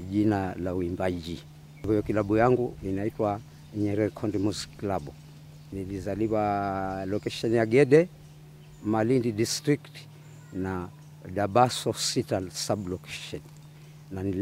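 No technical faults can be heard anywhere in the recording. Nothing in the audio breaks, drops out or changes in a way that points to a problem in how it was captured or carried.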